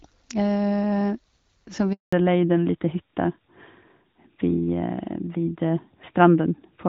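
At 1.93 s the speech cuts out for 200 ms, to 2.13 s. That's a handover gap: the phone was switching the call between networks and no speech frames arrived, so the sound fades out fast and sits silent until the new link picks up. Whatever was said in that window is gone.

From 2.13 s to the end there's a fallback to narrowband. Before the switch the speech has the fairly clean HD Voice character you'd expect from AMR-WB around 12.65 kbit/s. After it, nothing above 4 kHz remains, so the speech turns duller and rougher, which fits a drop to AMR-NB at about 12.2 kbit/s.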